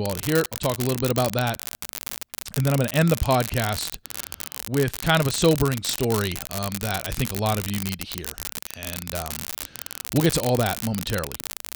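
Speech, with an unreliable data bit running from start to finish. One data line is marginal, so its bit flips at random. Each flip adds a spike of the same size, about -6 dBFS. The result is a constant crackling fizz that continues through the pauses.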